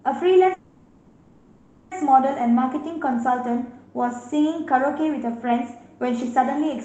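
A call audio freeze runs from 0.53 to 1.93 s: the sound stalls into a fading buzzy continuation of the last moment, likely an empty jitter buffer waiting on delayed packets. Nothing is lost; the speech resumes where it stopped, about 1.4 s late, through a call codec band-limited near 8 kHz.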